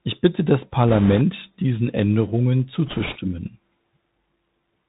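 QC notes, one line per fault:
Throughout: Bluetooth CVSD headset codec. The link encodes the signal one bit per sample, stepping up or down with an adapting step size, which fits a 64 kbps CVSD stream. Nothing above 4 kHz survives, so sibilants turn scratchy, loud bright passages distort where the step can't keep pace, and a granular hiss sits under the speech.
0.88–1.21 s and 2.87–3.18 s: Bit errors on a Bluetooth voice link. Flipped bits hit the CVSD stream, the first burst just after "bitte das", at a rate in the low single-digit percent, a bit heavier in the first burst. Each bit carries only a small step, so the errors fade quickly and give no sharp clicks. Instead, a rushing, crackly noise spreads over the speech for about a third of a second each time.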